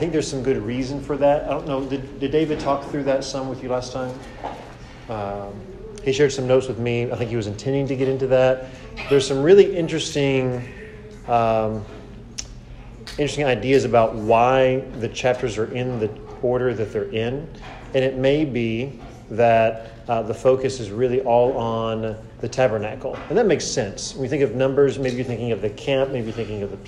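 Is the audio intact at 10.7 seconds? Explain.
Yes, the audio is intact at 10.7 seconds, with no dropout, click, distortion or other fault at that point.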